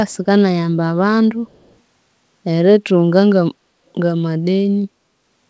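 At 0.09 to 0.17 s and again at 1.46 to 1.76 s, a very faint echo leak appears. A copy of the speech returns about 216 ms late. A loudspeaker echo canceller likely failed to remove it fully.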